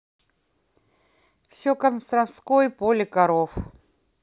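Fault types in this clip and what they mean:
Listening through the speech, nothing stood out as a technical fault.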